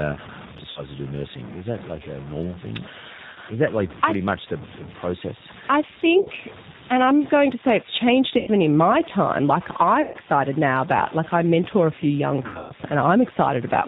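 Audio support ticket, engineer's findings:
Low bit depth without dither: grainy distortion that tracks level throughout, with gritty quiet tails. The waveform shows stair-stepped samples and a noise floor around 20 dB under signal. Likely truncation, about 6 bits.

G.729 codec: spectrogram empty above 4 kHz, with rough synthetic timbre. Consistent with 8 kbit/s CELP rebuilding speech from filter, pitch and pulse data.

VoIP packet loss concealed by the speech codec: buzzy, fading smears at 0.70–0.83, 3.33–3.38, 6.20–6.29, 8.38–8.50, 10.02–10.17 and 12.46–12.72 s. Flat, decaying harmonic bands show decoder extrapolation.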